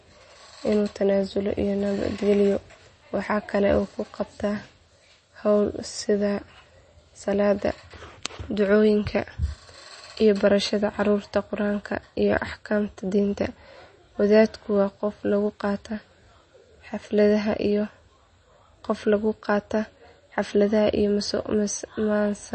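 The speech carries plainly audible MP3 compression throughout, likely from a low-bitrate encode near 32 kbps: a spectrogram shows a hard ceiling at 8.4 kHz, with watery, swirling sibilants where weak lines flicker.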